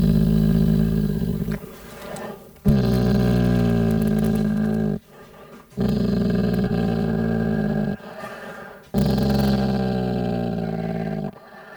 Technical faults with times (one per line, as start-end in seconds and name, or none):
0.00-11.76 crude rate conversion